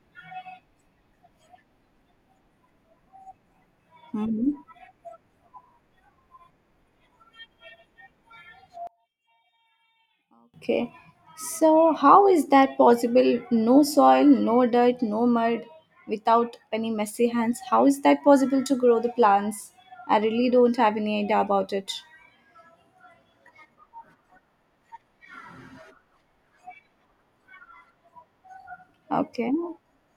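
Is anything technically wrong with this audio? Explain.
Yes. From 8.87 to 10.54 s the speech collapses by about 31 dB to a faint residue. This is likely one channel inverted: with reversed polarity, the centred voice cancels against itself when summed to mono. Unlike a dropout, a difference signal remains rather than silence.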